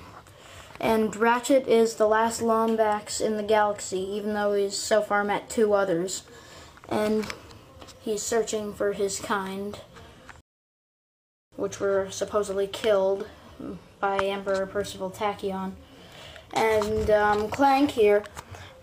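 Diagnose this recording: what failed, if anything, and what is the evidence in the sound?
The failure sits at the playback stage: a rebuffering stall. At 10.41 s the sound drops abruptly to silence. It stays silent until 11.52 s, then picks up exactly where it left off. Nothing is skipped or repeated across the gap. That is the signature of a player that drained its download buffer and waited for more data. About 1.1 s of dead time is inserted, so everything after the stall runs late by that amount.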